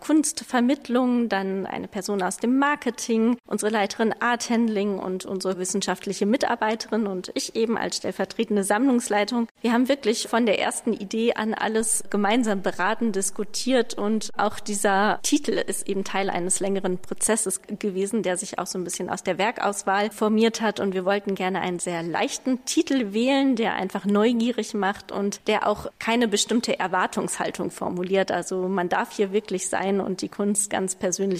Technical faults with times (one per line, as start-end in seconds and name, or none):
11.81-17.27 DC step